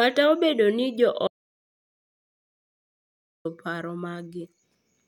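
An audio dropout to silence runs from 1.28 s to 3.45 s, right after "obedo ni jo". The speech stops abruptly mid-flow and the following 2.18 s is silent, with no room tone or background left, before the audio resumes just as suddenly. The likely cause is a brief loss of the input signal, such as a disconnected device, a failed link or an accidental mute, while recording kept writing silence. Whatever was spoken during that stretch is lost.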